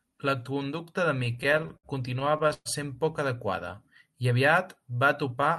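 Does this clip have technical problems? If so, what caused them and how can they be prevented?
Yes. Between 1.19 and 2.68 s there are repeated stalls (stutter): packets arrived late, so the jitter buffer kept running dry, and the receiver stretched the last sound across 17 short gaps, the longest 119 ms. Nothing is lost, but the speech drags. A deeper or more adaptive jitter buffer, or a steadier network path, would prevent this.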